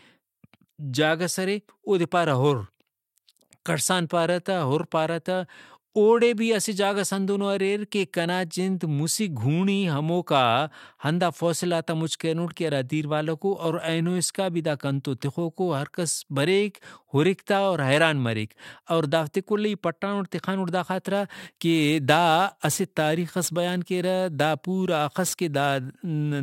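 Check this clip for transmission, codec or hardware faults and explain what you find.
One fault is audible, a crude rate conversion from 21.14 s to the end of the speech. In that stretch the sample rate has been raised with no anti-imaging filter, by repeating the nearest sample, which fits a jump from 44.1 kHz to 48 kHz. The repeats fall in a fixed cycle set by that ratio, spraying inharmonic error tones roughly 25 dB below the speech. It sounds like a gritty fizz riding on louder and brighter syllables.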